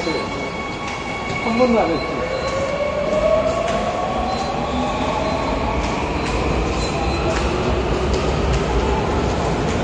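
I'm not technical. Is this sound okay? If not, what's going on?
No. The whole clip sounds dull and smeared, with a fizzy, warbling edge. Nothing comes through above about 9.7 kHz. This is likely AAC compression. The file was squeezed hard to save space, and the fine detail was thrown away.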